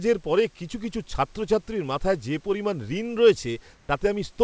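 From 3.74 s to 3.89 s, a 150 ms stretch of the background drops out and is replaced by comfort noise: a smooth, even hiss without the texture of the room noise around it, at nearly the same level, only about 1 dB different. The likely cause is discontinuous transmission, where the sender stopped sending during a pause and the receiver generated shaped noise to fill it. The background here sits about 35 dB below the loudest speech, and the substituted noise, like the rest of the audio, carries nothing above 8 kHz.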